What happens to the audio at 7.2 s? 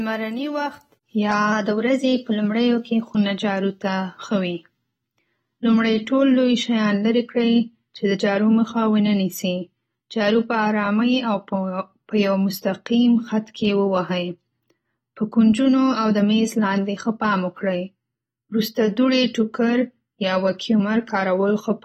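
At 7.2 s you're hearing the same AAC compression damage that runs through the whole clip. Nothing sits above 16.5 kHz, and the speech sounds dull and smeared, with a warbly, fizzy edge. That's likely coarse quantisation, which fits an AAC-LC encode around 40 kbps.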